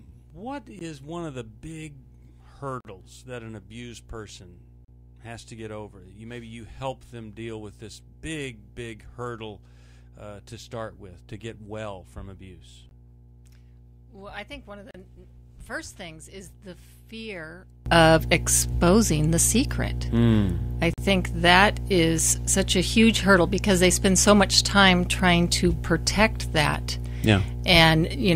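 A steady 60 Hz mains hum runs under the whole clip, strong, roughly 10 dB below the signal. A ground loop or a nearby transformer has coupled the power line into the recording, giving a constant low drone with faint harmonics at 120 and 180 Hz. On a spectrogram it shows as a bright horizontal line at 60 Hz across the full width, with weaker parallel lines above it. The waveform carries a fine periodic ripple even in quiet passages.

From the start until 17.86 s the sound is faint, dropping by about 21 dB when heard in mono. This likely comes from one channel inverted: reversed polarity on one side makes everything common to both channels cancel when they are summed, leaving only the weak difference between them. A spectrogram shows the whole signal sharply weakened until 17.86 s, when full level returns abruptly.

Within that stretch come hard-edged dropouts of silence, a gap between stream segments at each point: one at 0.79 s, then 2.81 to 2.85 s, 4.85 to 4.88 s, 12.89 to 12.91 s and 14.91 to 14.95 s. 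A last one falls at 20.94 to 20.98 s, after the full sound returns. They fall on a 2-second grid, where mismatched segment timestamps leave holes the player fills with silence. They sound like brief holes cut into the sound. On a spectrogram each is a thin vertical blank strip, and the waveform shows a flat line with abrupt edges.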